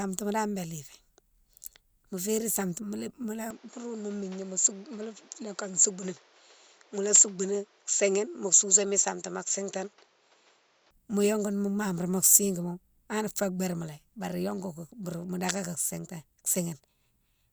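From 3.51 to 10.91 s the speech turns duller, with nothing above 7.6 kHz and a faint new noise floor, likely an input switched to a poorer device.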